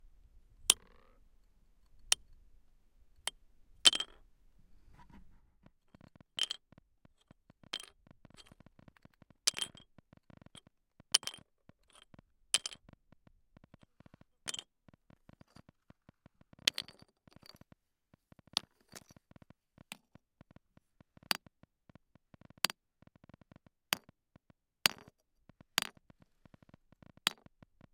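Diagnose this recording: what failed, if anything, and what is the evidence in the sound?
A train of clicks runs from 5.66 s to 27.85 s. Roughly 150 similar pulses arrive at about 7.7 per second, spaced irregularly, peaking about level with the audio. The likely cause is interference in the analogue wiring or a faulty connection or power supply injecting pulses.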